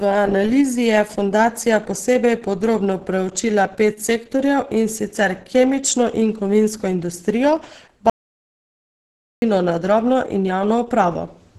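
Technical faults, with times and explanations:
Throughout, Opus compression: the speech sounds hoarse and muffled, with heavy codec damage and nothing above about 12.1 kHz. That points to a low bitrate around 12 kbps, likely pushing the encoder into its hybrid speech mode, where high bands get filled coarsely instead of kept.
8.10–9.42 s, audio dropout to silence: right after "kemično in kovinsko industrijo" the sound cuts to silence, with no room tone at all, for about 1.32 s, then comes back mid-flow at "na drobno in". The input was likely lost while silence kept being written.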